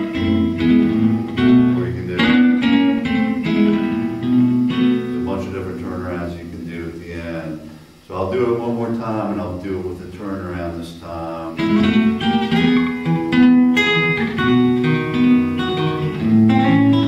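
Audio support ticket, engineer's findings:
No faults found in the audio for this ticket.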